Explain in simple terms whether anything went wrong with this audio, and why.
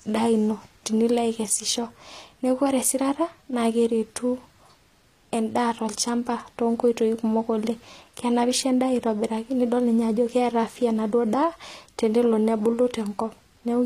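From start to finish, the s sounds in this speech come out gritty and plainly metallic, and nothing sounds above about 14.9 kHz. That points to likely HE-AAC compression, which rebuilds the treble from copied lower tones. Unlike plain muffling, the top still sounds bright, just false.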